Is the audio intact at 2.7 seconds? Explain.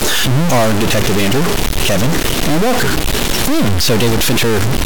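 No. At 2.7 seconds, as throughout the clip, the speech carries a harsh, buzzy distortion, and the gaps between phrases are filled with a steady hiss rather than silence. This is likely a stuck bit: one bit of every sample is held fixed, so roughly half the values jump by that bit's weight, about -10 dBFS, and the bit also flips with the sign of small values, turning the quiet passages into loud noise.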